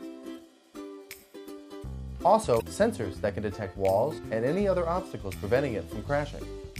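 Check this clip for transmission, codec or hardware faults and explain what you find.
One fault: damaged data in the compressed stream, from 2.58 to 2.62 s. A short run of corrupted bytes made the decoder misread those frames and lose sync until the next valid header, leaving a brief glitch of about 40 ms.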